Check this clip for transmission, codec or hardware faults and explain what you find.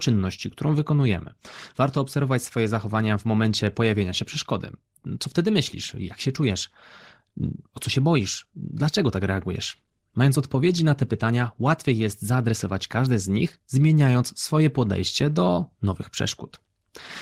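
Two related timing faults are present in the speech.

Clock drift between sender and receiver runs throughout. The sender's clock runs roughly 5 percent fast, so the receiver's jitter buffer keeps overfilling and must shed audio to keep up.

Repeated timing corrections run from 0.08 to 16.9 s. The receiver keeps cutting short pieces, giving an effective speed of 104 percent, heard as small, unevenly spaced hiccups and a slightly rushed, unsteady tempo.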